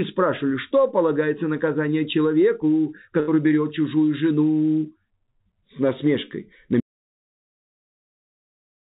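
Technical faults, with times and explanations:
3.20–3.29 s, burst of packet loss: Several packets in a row failed to arrive in time. The receiver stretched the last sound for about 73 ms and faded it. About 80 ms of the original audio is missing when playback resumes.
6.80 s to the end, audio dropout to silence: The sound cuts off abruptly and never returns. What follows is silence with no room tone at all. This points to a lost input, likely a disconnected device, failed link or accidental mute, while recording continued writing silence.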